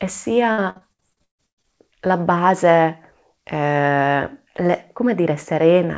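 Speech over a call line with a wideband codec, band-limited at 8 kHz. From 0.52 to 1.79 s there is repeated packet loss, giving a robotic sound. Around a dozen holes are patched by stretching the previous sound, the longest about 137 ms. Nearly half that stretch is concealed, so it sounds choppy.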